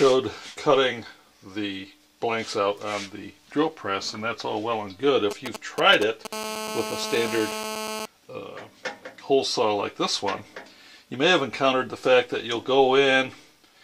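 From 5.31 to 6.27 s, GSM signalling bursts break in: a galloping dit-dit-dit of brief 217 Hz buzzes, roughly 10 dB below the signal. A nearby 2G handset sends short radio bursts while signalling, and the audio circuit rectifies them. The broken, rhythmic grouping sets this apart from a continuous buzz.

At 6.33 s the pattern turns into a steady GSM phone buzz that lasts until 8.06 s, about 8 dB below the signal. The phone now transmits in continuous bursts at about 217 Hz, as it does during a call, and the rectified pulses produce a hard, raspy, harmonic-rich tone. It doesn't follow the sound at all, which distinguishes it from distortion, and its unbroken character distinguishes it from the earlier galloping bursts.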